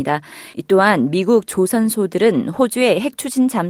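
No technical faults are audible.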